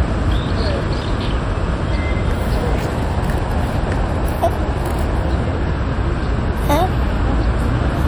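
No technical faults turn up at any point in the recording.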